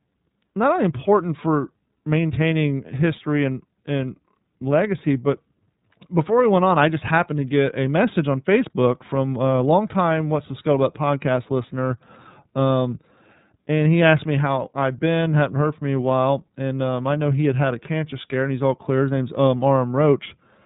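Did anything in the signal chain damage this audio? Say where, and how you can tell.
Yes: iLBC codec damage runs through the whole speech clip, from start to finish, and it comes from the codec stage. Nothing above 4 kHz survives, so the speech sounds boxed-in and narrowband, with a rough, slightly synthetic edge. The codec rebuilds each frame's excitation on its own rather than from the one before. The frame-to-frame graininess fits 30 ms frames at around 13.33 kbps. The damage is plainly audible.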